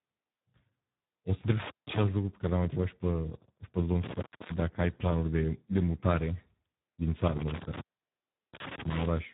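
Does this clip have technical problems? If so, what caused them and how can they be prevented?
Yes. Throughout, the speech sounds hoarse, buzzy and partly robotic, with nothing above about 3.8 kHz. This is heavy Speex codec damage: the speech codec has too few bits to rebuild the voice's excitation, which fits a very low setting near 8 kbps. Prevent it by using a higher Speex quality setting or a modern codec such as Opus.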